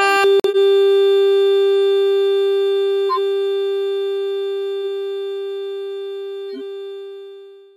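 At 0.40 s the audio drops abruptly into silence until 0.57 s. This is a corrupt frame muted. Damaged compressed frames were rejected by the decoder, and the player filled the gap with silence. The 0.17 s hole fits about four frame lengths. Timing stays intact.

At 3.09 s a burst of garbled sound cuts in for about 0.09 s, loud, peaking around -5 dBFS. At 6.51 s a similar but much quieter burst lasts about 0.1 s. Both are corrupt frame decoded faults. Flipped bits made the decoder misread gains and codes, spraying energy into wrong frequencies for roughly three frames each.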